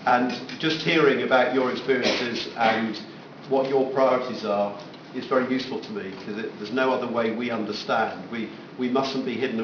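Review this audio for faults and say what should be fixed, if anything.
Aliasing runs through the whole clip. The sound appears to have been resampled to a much lower rate without an anti-aliasing filter, which fits a drop from 48 kHz to 11 kHz. Content above the new Nyquist limit of 5.5 kHz has folded back into the band at unrelated frequencies, giving a gritty, metallic edge to high-frequency detail. The alias products sit roughly 15 dB below the signal.

To prevent this, low-pass filter below the target Nyquist frequency before reducing the sample rate, or use a proper band-limited resampler.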